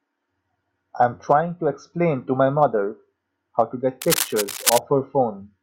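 From 4.01 to 4.78 s there's a burst of cable scratch noise, a dense, uneven rustle sitting just a little under the speech. It's likely a worn cable or connector being moved, its contact resistance jumping around and spraying scratchy noise into the signal.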